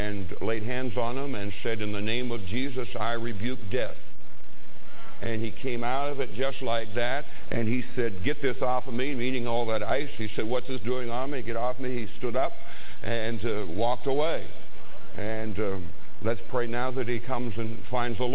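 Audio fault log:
No faults are heard in this clip. The audio came over a WebRTC call path working normally, and nothing is heard above 4 kHz, which fits a G.711 mu-law codec at 64 kbps.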